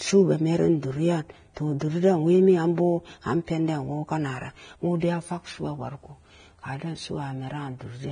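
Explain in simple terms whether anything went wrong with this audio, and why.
The whole recording has a hissy, grainy edge, and nothing in the speech reaches above about 9.7 kHz. That points to heavy Vorbis compression as the likely cause: squeezed that hard, the codec drops the top end and turns the remaining fine treble detail into rough noise.

There are also two short bursts of pre-echo, at 1.79 s and from 5.00 to 5.02 s. The codec spreads its noise across a whole block of sound, so a short hiss leaks in just before a sharp onset, leaving that attack smeared.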